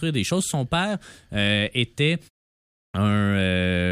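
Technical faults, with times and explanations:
2.84 to 2.94 s, clipped start after a pause: after a gap of about 0.63 s, the speech comes back with its first 0.1 s simply missing, so it snaps in out of silence with the onset already gone. That's the output device having dozed off during the quiet stretch and needing a moment to wake up and lock on again, and whatever arrives in that window never reaches your ears.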